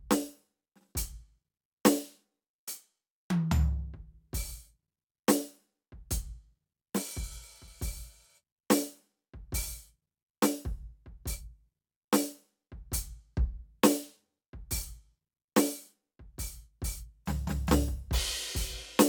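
No technical faults can be heard anywhere in this music recording, and the signal holds steady throughout with nothing that points to a problem in capture or playback.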